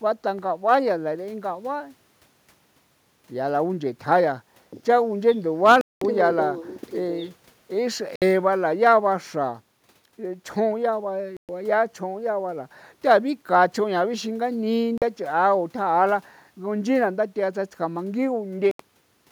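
The speech cuts out abruptly at 5.81 s (about 200 ms), 8.16 s, 11.37 s, 14.98 s and 18.71 s, then resumes further along: likely Bluetooth dropouts from late, discarded packets.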